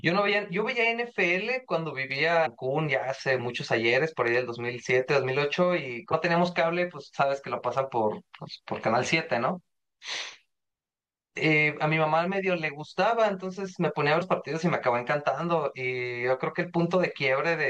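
At 2.45 s, 6.12 s and 14.21 s the speech is broken by short glitches, each a symptom of damaged data in a compressed stream. At each point corrupted bytes make the decoder misread the frame, lose sync and hunt for the next valid header, producing a brief disruption. On a spectrogram each shows as a thin vertical stripe cutting across the harmonics. The waveform shows a sudden discontinuity where the signal's shape abruptly changes.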